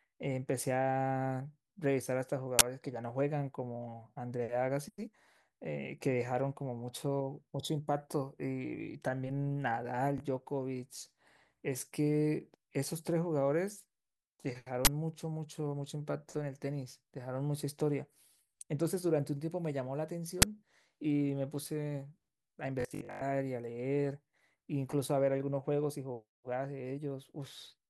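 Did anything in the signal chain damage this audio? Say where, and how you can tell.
Yes, two kinds of fault. Three times the speech is hit by a sudden, loud snap of harsh digital noise: 2.59 to 2.61 s, 14.85 to 14.87 s, and a shorter one at 20.42 s. These are uninitialised buffer faults at the driver or buffer stage. A block was handed to the output before audio was written into it, so leftover memory was played as samples. The blocks are 20 ms, and 10 ms for the last one, which is why each burst is so brief.

The second fault is Bluetooth stutter on the wireless link. At 10.18 to 10.20 s there is a single quick hiccup where a fragment of sound repeats, about 20 ms, which fits one lost packet. From 22.81 to 23.21 s the repeats bunch into a buzzing, machine-gun stutter. About 264 ms of audio is lost across that 406 ms stretch, and the longest run is about 102 ms. While data was missing, the receiver kept replaying its last buffer. 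When packets arrived again, the speech resumed further along, as though it had kept playing, so the missing audio is skipped rather than delayed.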